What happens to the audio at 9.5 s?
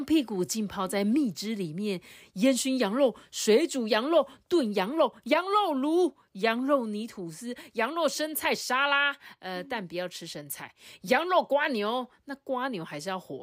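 Nothing goes wrong at 9.5 s: the speech continues cleanly through that moment with no dropout, click, distortion or other fault.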